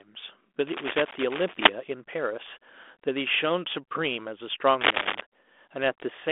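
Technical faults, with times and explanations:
0.67 to 1.69 s and 4.81 to 5.22 s, cable scratch noise: two patches of dense, ragged crackle sit on top of the speech, the first about a second long and the second under half a second, both peaking a little louder than the speech itself. That fast, uneven rustle is what you get when contact resistance jumps around, so a worn lead or connector being moved is the likely culprit. It rides over the narrow telephone band, which fits 32 kbit/s G.726.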